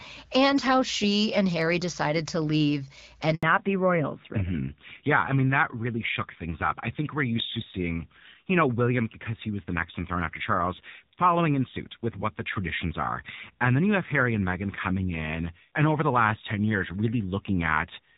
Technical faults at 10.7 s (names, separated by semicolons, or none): fallback to narrowband